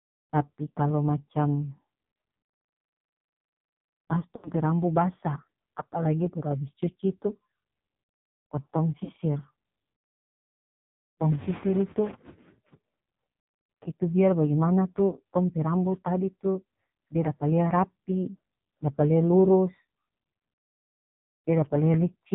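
The whole clip sounds buzzy, thin and synthetic, with nothing above 4 kHz and a coarse, reedy texture on the speech. This is heavy damage from the AMR narrowband mobile codec. The 8 kHz sampling removes all the upper band, and the vocal-tract model is driven by very few pulses per frame. That thin, buzzy quality points to one of the lowest AMR-NB modes, around 5.9 kbps.

At 0.70 s there is a brief dip and warble lasting about 20 ms, which fits a single lost frame. At 4.36 s the sound smears and sags over about 80 ms, then returns rough and weak. At 9.04 s a shorter 40 ms smear occurs. These are lost AMR speech frames. Radio errors made the frames fail their checksum, so the decoder repeated the last good pitch and vocal-tract settings with falling gain until good frames arrived.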